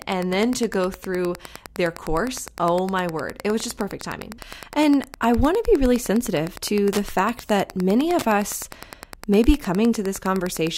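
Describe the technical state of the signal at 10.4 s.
At 10.4 s the speech carries Wi-Fi interference, present throughout the clip. A nearby Wi-Fi radio's beacon, repeating every 102.4 ms, is being rectified by the audio circuit, so a steady ticking about ten times a second sits roughly 20 dB below the speech.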